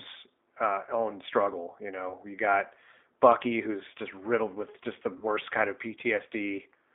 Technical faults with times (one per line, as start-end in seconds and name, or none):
0.00-6.95 G.729 codec
2.10-2.14 VoIP packet loss concealed by the speech codec
5.17-5.26 VoIP packet loss concealed by the speech codec